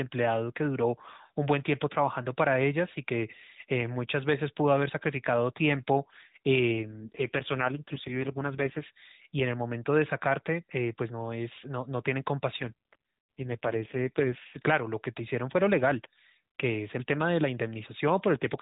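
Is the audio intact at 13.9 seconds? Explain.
No. At 13.9 s the clip is inside an AMR rate drop running from about 12.60 s to 14.58 s. The band stays the same and nothing cuts out, but the narrowband speech turns rougher, buzzier and more synthetic, a change that fits the codec stepping down from 12.2 kbps to its 4.75 kbps mode. With fewer bits per 20 ms frame, the vocal-tract model and its excitation pulses are coded far more coarsely until the rate recovers at 14.58 s.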